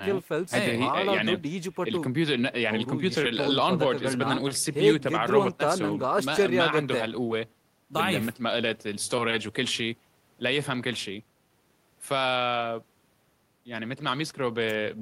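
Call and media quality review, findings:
Nothing stood out on listening to the speech recording.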